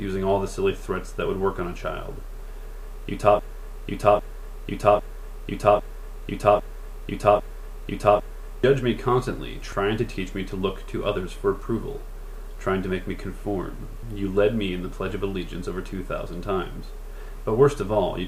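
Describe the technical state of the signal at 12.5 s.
At 12.5 s the signal is intact, with no audible fault at that point.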